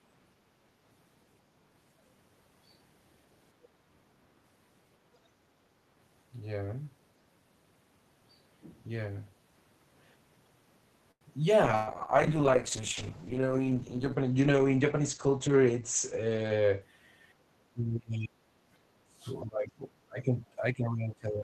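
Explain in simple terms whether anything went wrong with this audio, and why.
Several things go wrong in the second half of this speech clip.

At 11.11 to 11.24 s there is a short stall from a late packet. A piece of audio arrived late. The receiver had nothing new to play, so it held the last sound for about 95 ms. Nothing is lost. But one sound is stretched, and everything after it runs that much later.

From 11.65 to 16.87 s there is a call bitrate drop. The connection seemed to have less room, so the sender squeezed the voice into far less data. For about 5 seconds the speech sounds rough and muffled. The crisp top end is gone, because the sound is cut off above 8 kHz instead of reaching the full range. Then the quality comes back.

Inside that stretch, at 11.75 to 12.04 s, there is a burst of packet loss. About 120 ms of audio never arrived in time. The receiver tried to bridge the gap by carrying on the last sound and letting it fade, as a held buzz or hiss. 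When the audio resumes, that slice of speech is simply missing.

From 14.46 to 15.67 s there is a jitter buffer speed-up. Too much audio had piled up waiting to play. To catch up, the receiver cut out many tiny slices, about a tenth of a second in total. The voice keeps its pitch but runs about 7 percent fast, so it sounds slightly hurried.

Near the end, the voice is repeatedly pushed down or cut into pieces. This happens at 17.71 to 18.55 s, 18.87 to 19.27 s, 19.45 to 20.39 s, and from 20.6 s to the end. The likely cause is speech suppressed in double talk. Both people spoke at once, and the echo canceller could not tell this voice from the echo, so it turned it down. The first dip is the deepest, and the later ones are milder.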